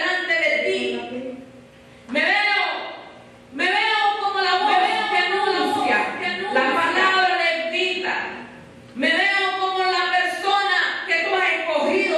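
A second copy of the audio was most likely picked up again through a slower route, or left in by an edit, from 4.01 s to 7.25 s: a doubled audio track. The duplicate runs roughly a second behind the original and sits a few decibels lower, around 5 dB down, yet keeps the full bandwidth with no reverb or tail. Everything sounds twice, like a hard, flat echo, and the copy cuts in and out abruptly at both ends.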